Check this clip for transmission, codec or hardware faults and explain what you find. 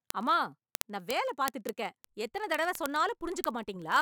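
Word clock ticks run through the speech from 0.10 s to 4.0 s: a receiver on its own clock, off by roughly a thousandth, slips one sample about every 20 ms, giving some two hundred sharp ticks of uneven strength at a steady rate.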